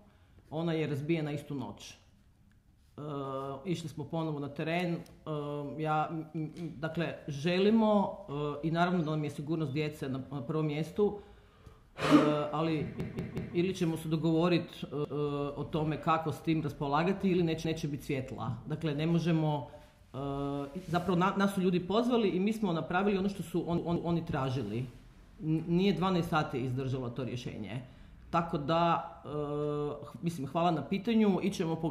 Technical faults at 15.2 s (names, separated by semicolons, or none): repeated buffer